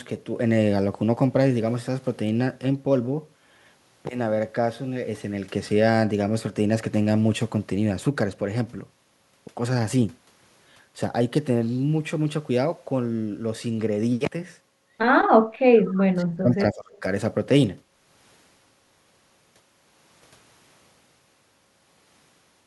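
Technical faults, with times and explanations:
15.36 to 17.05 s, speech suppressed in double talk: The talker's level falls away in pieces across this stretch. The deepest dips reach about 40 dB down, and about a second and a half of speech is affected in total. The likely cause is that both sides spoke at once. The echo canceller could not tell the near voice from the loudspeaker echo. So it turned everything down together, and the speech drops out.
15.86 to 16.03 s, echo leak: A faint delayed copy of the voice is heard. It trails the original by 217 ms. It sits about 20 dB below the speech and lasts under a fifth of a second. The likely cause is a far-end loudspeaker feeding its own microphone. That side's echo canceller left part of the pickup in place. The remainder was sent back down the line as this short echo.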